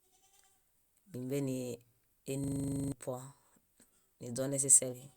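A speech clip with a system hang loop from 2.44 to 2.92 s. A single 40 ms slice of audio repeats exactly, twelve times, giving a rough 25 Hz buzzing stutter while the system froze and the sound hardware kept replaying its ring buffer. About half a second of speech is lost. Unlike packet-loss concealment, which smears or fades repeated audio, these cycles are identical.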